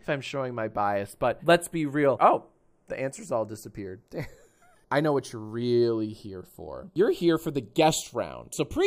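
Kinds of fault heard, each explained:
Channels drifting apart: a slow flanging runs through the whole clip, a hollow, phasey sweep that creeps steadily onward, left by the two channels having been summed to mono. The left and right channels behave as if captured on devices with separate clocks, differing by something like 30 parts per million, so the offset between them widens to roughly a third of a millisecond by the end, dragging comb-filter notches slowly through the spectrum.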